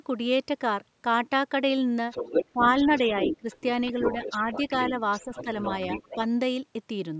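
From 2.11 to 3.62 s, a second voice sits behind the speech, only a little quieter. This is the other side's voice leaking through. The echo canceller likely left part of the loudspeaker signal in the microphone. The voice returns, fainter, from 3.86 to 4.63 s and from 4.82 to 6.16 s.

Speech suppressed in double talk shows as brief dips while both voices overlap. The first runs from 2.52 to 2.66 s and drops about 15 dB. The second, from 3.39 to 3.46 s, drops about 20 dB. A slight dip of about 5 dB follows from 4.42 to 4.49 s. The canceller likely could not separate the two voices and turned both down.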